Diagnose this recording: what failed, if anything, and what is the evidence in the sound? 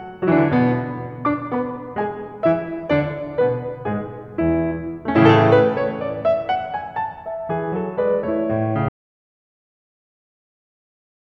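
Audio dropout to silence from 8.89 s to the end of the music. The sound stops mid-flow and what follows is silence, with no room tone, hiss or decay tail, so the music did not fade but was cut at the source. The stage is the input side, before the recorder: the signal was most likely lost through a disconnected cable, failed link or accidental mute, while the recorder kept writing silence until the file ended.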